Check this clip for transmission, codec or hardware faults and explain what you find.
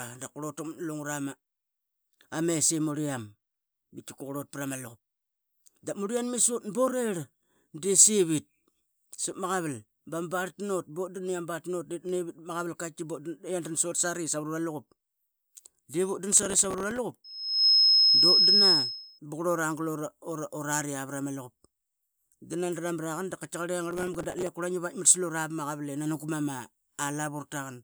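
Two kinds of fault are present: processor overload crackle twice, and a loudspeaker feedback squeal between them.

Processor overload crackle occurs at 16.33–16.98 s and again at 23.91–24.49 s. Dozens of buffers only a few milliseconds long miss their deadlines. Stale audio repeats with hard edges, producing gritty crackle over the speech.

A loudspeaker feedback squeal runs from 17.24 to 19.19 s. The microphone picks up its own loudspeaker, and the loop gain exceeds one at 5.2 kHz. A single tone swells within half a second to about 10 dB above the speech.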